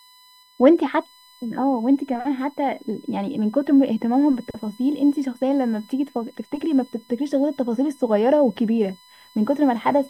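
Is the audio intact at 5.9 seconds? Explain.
No. At 5.9 seconds, as throughout the speech, a steady fixed-pitch whine sits faintly underneath, well below the voice, built on 1 kHz and loudest at its 4 kHz harmonic. This is USB whine: current drawn in 1 ms bus frames leaking into the audio through power or ground.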